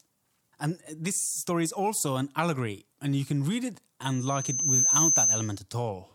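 Loudspeaker feedback squeal, 4.02 to 5.61 s, after "you can read it": the microphone re-amplifies its own loudspeaker, so a 6.2 kHz tone swells to about 10 dB above the speech.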